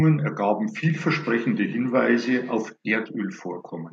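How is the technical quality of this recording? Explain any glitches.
The recording has a feedback echo between two devices from 0.9 to 2.72 s. A second device in the room replays the call, and this microphone picks it up again, so the speech returns about every tenth of a second, thinner and ringing, peaking about 17 dB below the speech.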